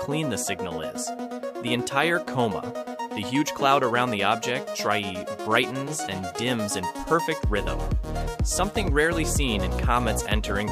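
No technical faults can be heard in this clip. There are no events to place in time, so the audio needs no timeline of problems.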